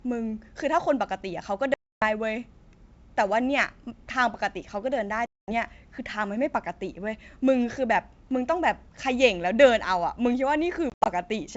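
Hard-edged silent holes cut the speech at 1.74 to 2.04 s (280 ms missing), 5.26 to 5.50 s (220 ms), and 10.90 to 11.07 s, where 120 ms of gaps are scattered, the longest 80 ms. Each time the speech resumes with brief, slight distortion that settles within tens of milliseconds. This is packet loss on an ADPCM call: roughly fifteen, ten and seven packets go missing, and the decoder's predictor and step size lose track of the sender's. The G.722 wideband coding itself, consistent with 64 kbit/s, keeps the band up to 7 kHz clear.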